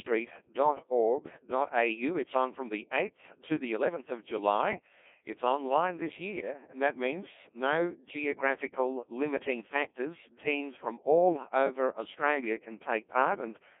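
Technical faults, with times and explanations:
Throughout, Codec 2 vocoder: speech is rebuilt from pitch and envelope within 250 Hz to 3.6 kHz, sounding heavily robotic and buzzy, fitting a 1.6 kbit/s mode.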